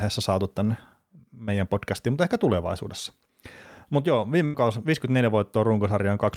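At 4.45 s a burst of packet loss stretches the last sound into an 81 ms fill that fades out. 60 ms of speech are skipped, and the speech resumes 21 ms late. A spectrogram shows frozen, dimming horizontal bands, then an abrupt restart.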